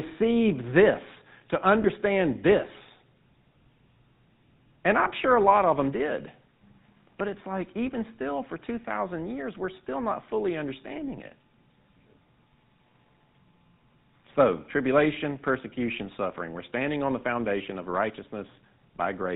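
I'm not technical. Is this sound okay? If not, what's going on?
No. The whole clip has passed through the GSM full-rate codec, an early mobile-phone voice system. It rebuilds the voice from a simplified model, drops everything above 4 kHz, and leaves a plainly audible buzzy, gravelly roughness that makes the speech sound dull and phone-like.

There are also two lost GSM frames, at 1.82 to 1.86 s and at 5.04 to 5.07 s. Each time, a short piece of data went missing and was patched by repeating the previous moment, so the voice briefly smears into a rough, metallic ring.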